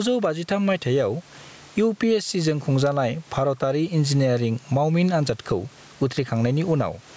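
Throughout, the gain swings by about 15 dB: gain pumping, likely a fast limiter fighting excessive input gain.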